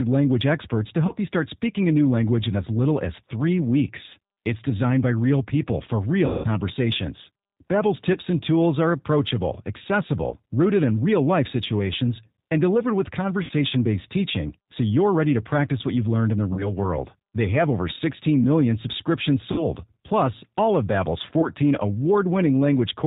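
The whole speech track runs through the G.729 codec, here the G.729A variant at 8 kbit/s. The damage is plainly audible. Each 10 ms frame is rebuilt from a vocal tract filter, a pitch predictor and a few pulses. Nothing above 4 kHz survives. The voice sounds dull, slightly rough and synthetic.

The first VoIP packet loss concealed by the speech codec comes at 1.07 to 1.13 s. About 20 ms of audio is missing. The decoder repeats its last pitch and filter with falling gain. The disturbance outlasts the gap because each frame builds on the last. The longest loss is at 6.26 to 6.48 s. About 180 ms goes missing, which fits nine lost 20 ms packets. There the sound stretches into a buzzy tone or a coloured noise that fades. Shorter losses follow at 8.13 to 8.18, 10.29 to 10.34, 13.43 to 13.52, 16.53 to 16.73, 19.52 to 19.65 and 21.41 to 21.48 s. These are brief, weak or smeared patches.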